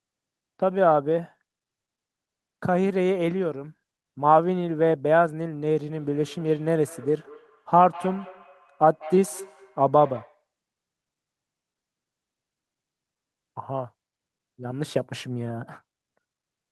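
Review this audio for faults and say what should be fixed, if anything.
Feedback echo between two devices, 5.94 to 10.44 s: a nearby device's playback re-enters the microphone, repeating speech roughly every fifth of a second, at up to about 18 dB below it. To prevent it, mute or headphone the second device in the room, or keep only one device joined to the call.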